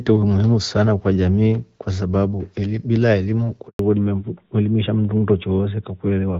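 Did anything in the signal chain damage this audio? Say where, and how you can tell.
Yes. At the network stage there is a handover gap from 3.67 to 3.79 s. The sound fades within a few tens of milliseconds and then stays silent until the new link starts carrying audio, 120 ms after the gap began. While the call moved between networks, no speech frames arrived, so that stretch of audio was never delivered. A waveform shows a flat, empty stretch there. A spectrogram shows a blank vertical band across all frequencies.

From 3.79 s to the end, the call shows a fallback to narrowband at the codec stage. Before the gap, the audio has the extended top end of AMR wideband, lightly coloured in a way that fits its 12.65 kbit/s rate. After the gap, it turns duller and rougher, because nothing above 4 kHz passes. That change is consistent with a switch to AMR narrowband at 12.2 kbit/s. A spectrogram shows energy cut off sharply at 4 kHz after the gap, with the band above it empty.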